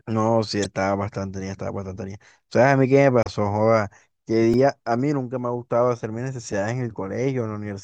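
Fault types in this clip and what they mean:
Damaged data in a compressed stream: Bytes in the encoded stream were corrupted, so the decoder misread those frames and had to resynchronise on the next valid header. It shows as three brief garbled blips, at 0.62 to 0.66 s, 3.23 to 3.27 s and 6.52 s, each a few tens of milliseconds or less. Unlike a repeated buffer, the disturbance is not a copy of nearby sound but a foreign burst where the decoded audio briefly breaks down.
Repeated buffer: At 4.54 s the playback device ran short of fresh audio and replayed its last block instead. A chunk of about 1.3 ms, which fits a 64-sample buffer, sounds four times in a row, each join a hard edge. Because the repeated piece is so tiny, the effect is a quick click or buzz rather than an audible stutter. It differs from stream damage in that the sound is a true loop of the preceding audio, not a garbled burst.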